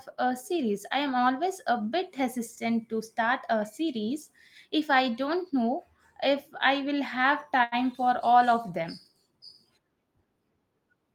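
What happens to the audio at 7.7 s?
A short stall from a late packet runs from 7.63 to 7.75 s. The receiver stretches the last sound for 85 ms, so the speech lags 85 ms after that.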